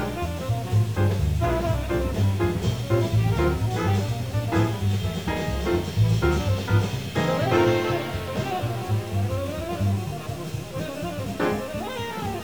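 Harsh, buzzy distortion runs through the whole audio, and it does not go away in the quiet passages, where noise remains. The likely cause is a stuck bit, with one bit of each sample held at 0 or 1 by a broken data line or converter. The error step is roughly about -40 dBFS, so around half the samples carry that offset. The bit also flips with the sign of small values, which fills the pauses with noise.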